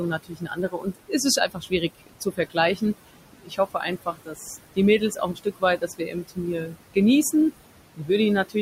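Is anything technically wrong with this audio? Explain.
Yes. Throughout the clip the background sinks away in the gaps and swells back under the speech. These are noise suppressor artifacts. The suppressor estimates the steady room noise, which sits about 13 dB below the speech, and pulls down every band it judges to be noise, frame by frame, by about 20 dB.

In six places the speech itself goes faint or swallowed: 0.11–1.14 s, 1.36–2.57 s, 3.33–4.49 s, 4.99–6.39 s, 6.61–6.78 s and 7.95–8.1 s. These are speech cuts by the noise suppressor. It mistook quiet parts of the speech for background and attenuated them along with the noise, by about 18 to 22 dB at the deepest. The longer spans lose somewhere between half a second and most of a second of speech in patches. The two short ones near the end each lose only a brief fragment.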